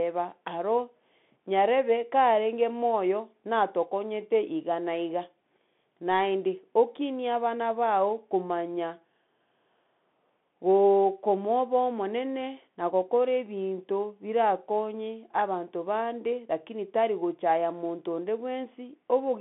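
Throughout the speech, the audio has passed through a Bluetooth CVSD headset codec, which sends one bit per sample to say whether the waveform should step up or down, with a step size that adapts as it goes. The band is squeezed to roughly 150 Hz to 3.5 kHz, which fits the 64 kbps narrowband headset link. The coding damage is plainly audible: loud, bright passages outrun the step and distort, s sounds come out scratchy, and a granular hiss sits beneath the speech.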